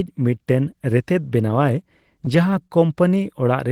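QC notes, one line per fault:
2.68–2.71 s, short stall from a late packet: the speech briefly hangs on one sound, which is held a touch too long with a faint buzz or dip. A packet arrived late and the jitter buffer ran dry. The receiver filled the gap by stretching the last sound for about 16 ms. When the packet came in, playback resumed from the same point. Nothing is lost, but everything after now runs 16 ms later.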